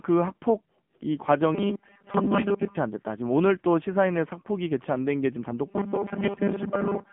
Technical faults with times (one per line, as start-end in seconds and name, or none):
0.00-7.13 AMR narrowband mobile codec